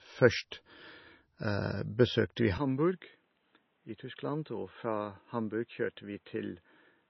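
Low-bitrate audio saved at a high bitrate affects the whole speech clip: nothing survives above 5.9 kHz, likely because a 24 kbit/s MP3 was re-encoded at 320 kbit/s, which cannot restore the lost band. Input switched to a poorer device at 2.58 s, right after "besøkte vi", and the speech turns duller to the end, with nothing above 4 kHz, a level drop of roughly 10 dB and a faint new noise floor, likely a change to a narrower-band microphone with no gap at the switch.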